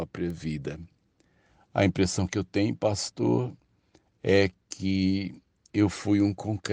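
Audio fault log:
0.30 s and 3.00 s, bit error spike: each is a single sharp tick peaking at about -23 dBFS. The first spans one sample and the second just three. A flipped bit makes the sample value jump by a power of two and straight back, so the energy spreads across the spectrum with no link to the speech around it. Unlike a dropout or splice click, no audio is missing and the waveform carries on unbroken either side.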